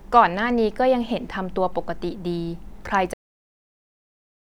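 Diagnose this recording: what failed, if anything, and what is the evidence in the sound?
The recording fails with a cut-off end, a storage or buffer fault. At 3.14 s the speech stops mid-sound and drops straight to digital silence with no decay, which holds to the end. The final buffers were never written to the file, so the tail is missing.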